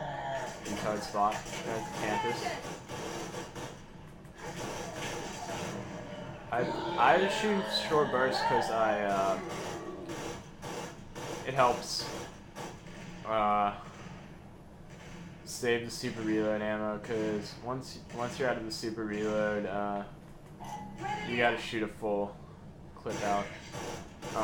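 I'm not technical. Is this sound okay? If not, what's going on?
No. Throughout, there's imaging from linear upsampling: the audio was stretched to a higher rate by joining samples with straight lines, which dulls the top and leaves mirror copies above it, around 12 to 24 kHz, heard as a metallic shimmer on high sounds. Unlike aliasing, nothing folds down into the lower range.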